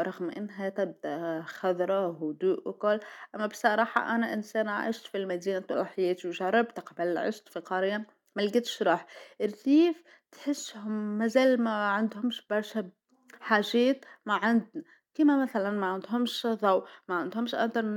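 No technical faults can be heard anywhere in the speech; the signal stays continuous and intact throughout.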